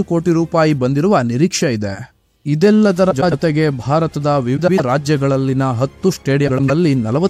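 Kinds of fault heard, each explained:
Frames out of order: Neighbouring blocks of about 105 ms play in swapped order, three times here. Each stretch sounds like a garbled flutter.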